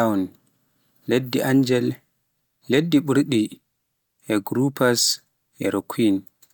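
No dropouts, glitches, distortion or level problems turn up anywhere in this speech recording.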